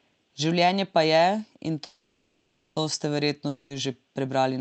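A call audio freeze runs from 1.85 to 2.78 s, right after "pa je in". The most likely cause is packets held up in transit until the jitter buffer ran dry. The receiver stretched the last sound into a buzzy hiss that fades over about 0.91 s. When the audio returns with "to ste", it picks up exactly where it stopped. Nothing is lost, but everything after this point plays about 0.91 s late.

A long network dropout follows at 3.48 to 3.72 s, after "je in to ste". It likely comes from a stretch of packets that never arrived at all. Again the last sound is carried on as a fading buzz, here for about 0.22 s. This time the audio resumes further along, so that 0.22 s of the original is simply gone. Throughout the clip, the Opus call path limits the audio to 8 kHz, consistent with a bitrate around 32 kbps.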